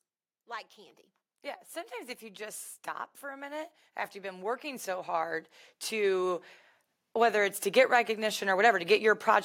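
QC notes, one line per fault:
3.2–6.48 s, automatic gain rising: the automatic gain control judged the input too quiet and steadily pushed its gain up by about 11 dB over roughly three seconds, so the speech and the background noise beneath it swell louder together rather than the voice alone.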